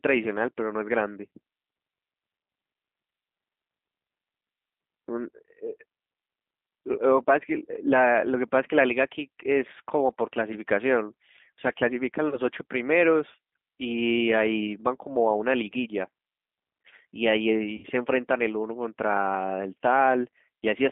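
G.729 codec damage runs through the whole 21-second speech clip. The line is confined to roughly 200 Hz to 3.6 kHz, and the roughness and synthetic edge are what you get when a decoder rebuilds each 10 ms frame from a vocal tract filter, a pitch predictor and a handful of pulses. That points to an 8 kbit/s G.729A link, with plainly audible damage. VoIP packet loss concealed by the speech codec appears at 12.29 to 12.39 s and again at 17.77 to 17.86 s. About 30 ms of audio is missing in the first gap, which fits a single lost packet, and about 60 ms in the second, which fits two. In both places the decoder repeats its last pitch and filter at falling gain. Because each frame builds on the one before, the sound stays weak and distorted for a short while after the stream resumes, which is why each disturbance lasts longer than the missing audio.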